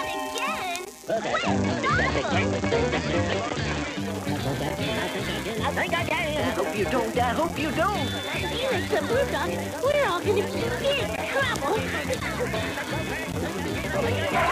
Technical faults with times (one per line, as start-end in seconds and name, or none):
0.95-4.19 digital radio blending to analogue